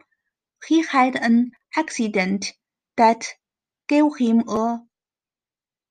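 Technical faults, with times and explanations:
Nothing technical gets in the way of the speech here; there's no fault to point to at any moment in the recording.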